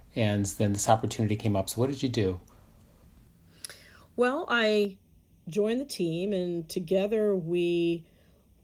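Channel delay (comb filtering) sets in at 4.85 s and lasts to the end of the speech. One channel arrives about a third of a millisecond behind the other. When the two are folded to mono, components that are common to both cancel at evenly spaced frequencies, with the first notch near 1.5 kHz. The voice turns hollow and phasey, losing presence in the midrange, while the light Opus coding underneath stays unchanged.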